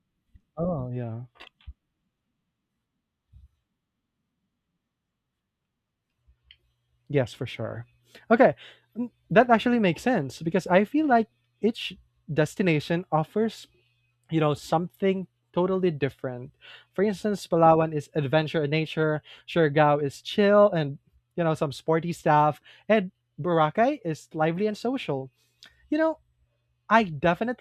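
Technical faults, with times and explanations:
No technical faults can be heard in this speech recording. Nothing in the audio points to a problem in how it was captured, processed or delivered.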